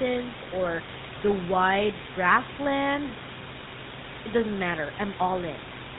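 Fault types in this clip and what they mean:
GSM full-rate codec: The speech runs through the original GSM coder, which rebuilds the voice from a vocal-tract filter fed by a coarse pulse train, the kind of rough, buzzy grit that fits a 13 kbps full-rate link, and here that damage is plainly audible throughout. On a spectrogram the energy stops at a hard ceiling near 4 kHz, and harmonics look smeared and grainy rather than clean, while the room noise sits about 10 dB below the speech.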